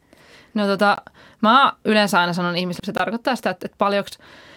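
At 0.96 to 0.98 s there's a gap between chunks: a hard-edged 20 ms hole right before "mä yleensä aina sanon". The speech arrives in 2-second pieces, and nothing's lost, but the join leaves a clean dropout. It recurs exactly two seconds later, at 2.98 to 3.00 s.

Just after "mä yleensä aina sanon", at 2.79 s, the speech suddenly jumps ahead with a small blip. That's likely a stream segment skipped, where a piece failed to load and playback carried on with the next one.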